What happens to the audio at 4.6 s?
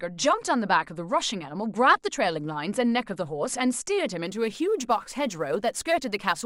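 Sample clock jitter sets in at 4.26 s and runs to the end of the speech at 6.45 s, so 4.6 s falls inside it. The converter's timing wanders by a few microseconds, and each sample lands slightly off its proper instant. Steeper, faster-moving parts of the waveform turn that timing slip into larger errors, leaving a grainy hiss around 30 dB below the signal. The roughness rises on loud, bright sounds and falls away in pauses.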